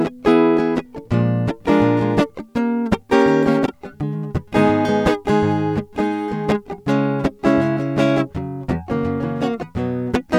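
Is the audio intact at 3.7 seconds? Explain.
No. Frames out of order from 3.66 to 3.72 s: two adjacent blocks, likely single 26.1 ms frames, decoded swapped, so the music briefly flutters.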